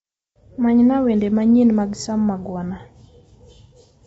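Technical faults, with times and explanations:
Throughout, low-delay AAC compression: the speech sounds rough and grainy, with noise between the pitch harmonics and nothing above 7.8 kHz. The likely cause is AAC-ELD, whose short frames resolve pitch poorly and leave too few bits, which fits about 24 kbps.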